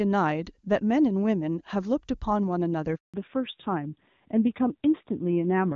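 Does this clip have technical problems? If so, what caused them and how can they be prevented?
Yes. From 2.96 s to 3.14 s there is a handover gap. The call switched networks and no speech frames arrived for 180 ms. The waveform flattens to silence within a few tens of milliseconds, and the spectrogram shows a blank vertical band. Completing the handover before the old link drops, or cutting the switching delay, would prevent it.

From 3.14 s to the end, the call falls back to narrowband. Before the handover the audio has the clean wideband reach of HD Voice, which fits a high AMR-WB rate. Afterwards everything above 4 kHz disappears and the speech turns dull and rougher, pointing to a low-rate AMR-NB codec. The spectrogram shows a sharp horizontal ceiling at 4 kHz. Keeping the new network and both handsets on AMR-WB would avoid it.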